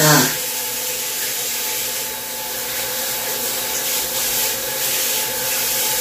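Nothing technically wrong turns up in this recording of sounds, so there's nothing here to point to or explain.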